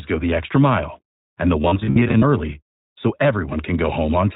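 The whole clip carries the sound of the iLBC codec, and the damage is plainly audible. Everything above 4 kHz is gone, and the voice has that rough, slightly synthetic edge, which fits the 15.2 kbps mode with its 20 ms frames.

Between 1.62 and 2.24 s you get lost iLBC frames. About 320 ms of audio went missing, scattered across those 600 ms in short bursts of up to around 70 ms. The decoder patches each hole by repeating the last pitch cycle with some noise, so you hear brief held, buzzy vowel-like smears. The voice comes back cleanly right away at "early so".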